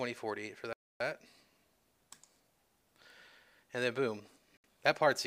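Bluetooth stalls cut the audio to silence from 0.73 to 1.00 s, about 274 ms, and again from 4.57 to 4.64 s, 70 ms. Each gap is likely radio interference delaying packets until the headphones' buffer emptied and playback halted for the resends.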